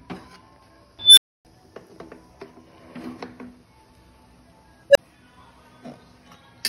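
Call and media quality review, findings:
Unstable filter, 0.99–1.45 s and 4.90–4.98 s. Squeal near 4 kHz swells over 184 ms, then drops out for 279 ms. Tone near 500 Hz rises in 52 ms, with a 23 ms gap. Recursive filter diverging, overflowing, resetting.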